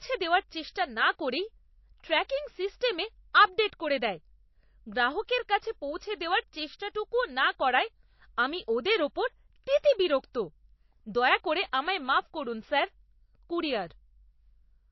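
Likely MP3 compression at a low bitrate, around 27 kbps, strips everything above 5.8 kHz and drops weak detail, so the speech sounds dull, watery and swirly throughout. Pre-echo spreads codec noise ahead of sharp attacks, adding a brief hiss and softening the onset: 50 ms from 0.71 to 0.76 s, at 2.28 s, 59 ms from 9.78 to 9.84 s, and at 11.72 s.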